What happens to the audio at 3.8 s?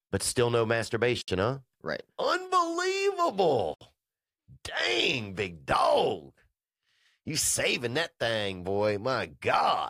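The speech drops out for about 69 ms, from 3.74 s to 3.81 s, a gap at a join of encoded pieces. Two separately encoded segments were butted together without removing the encoder's start-up delay and final-frame padding, so that dead air remains between them. The sound cuts off, sits silent, then resumes exactly where it stopped, with both edges smeared by the codec rather than perfectly clean.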